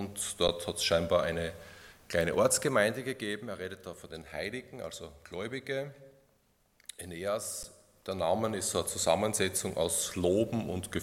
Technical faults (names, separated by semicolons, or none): underrun with held sample